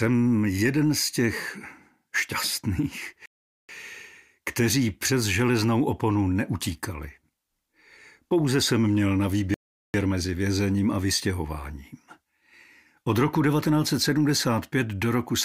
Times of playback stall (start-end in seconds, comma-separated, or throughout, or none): 3.26-3.69, 9.54-9.94